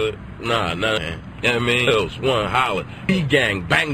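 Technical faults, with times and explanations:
0.98 s, 1.87 s and 3.09 s, compressed frames skipped: at each point the sound lurches forward and a stretch of audio is simply absent: about half a second at 0.98 s, about 0.7 s at 1.87 s and about 0.2 s at 3.09 s. Whole frames of the compressed stream were never played, being lost or rejected as damaged by the decoder. The jump sizes fit multiples of 32 ms frames.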